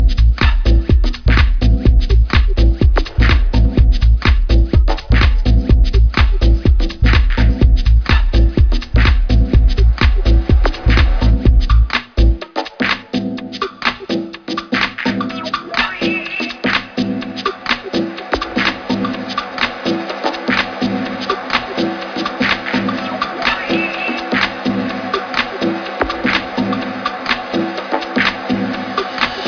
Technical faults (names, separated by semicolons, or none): none